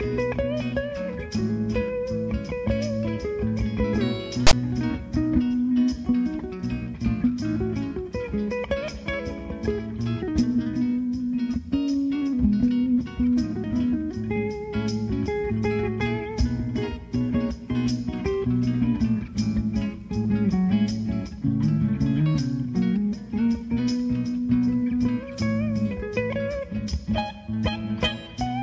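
At 4.47 s a harsh, buzzy rasp cuts in with no fade, sitting lopsided as if pushed to one side, and it stops just as abruptly, falling into a brief dead silence before the block ends at 4.53 s. This is file tags played as audio: a block of text metadata was decoded as sample data. The character bytes form a loud, skewed waveform that produces the rasp, and the zero padding that follows plays back as silence.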